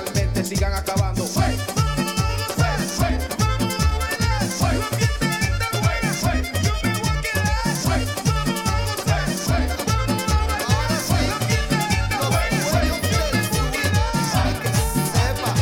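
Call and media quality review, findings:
No faults found: the signal is clean across the whole clip.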